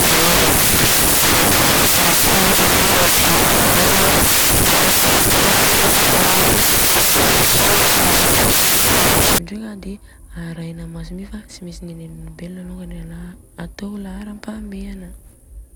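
From 0.0 to 9.38 s, the speech is buried under loud, harsh broadband noise. This is samples built from the wrong bytes. The reader assembles each sample incorrectly. It may be shifted by a byte, have its byte order swapped, or assume the wrong alignment. The rapidly changing low bits end up as the large part of every value. So the waveform turns to hiss.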